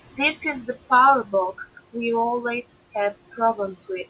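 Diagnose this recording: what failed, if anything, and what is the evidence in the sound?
The noise suppressor in the call processing stage is over-working. It pulls down whatever it judges to be steady background by about 17 dB, frame by frame, so the room noise drops away in the gaps and comes back up underneath the speech. The speech sits within a band that stops near 4 kHz, which fits a narrowband telephone codec.

Speech cut by the noise suppressor happens once, from 1.24 to 1.33 s. For about a tenth of a second the suppressor misreads part of the speech as background and attenuates it together with the noise, by about 9 dB at the deepest point. That stretch sounds swallowed and faint, as though a soft consonant or the tail of a syllable had been dipped out. The gain recovers as soon as the suppressor recognises the speech again.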